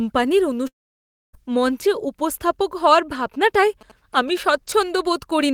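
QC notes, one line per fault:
0.67–1.35 s, long network dropout: The speech breaks into a brief fading buzz, then near-silence for about 0.6 s. It resumes at "মঞ্চে উপস্থাপক হওয়ার" with roughly 0.66 s lost. This is likely a network stall, with the receiver briefly extending the last sound before going quiet.
3.19–4.39 s, GSM signalling bursts: A galloping dit-dit-dit pattern of short buzzes follows "মঞ্চে উপস্থাপক হওয়ার". The buzz sits at about 217 Hz, the 2G frame rate. A nearby phone's signalling bursts are rectified by the audio circuit, at roughly 25 dB below the speech.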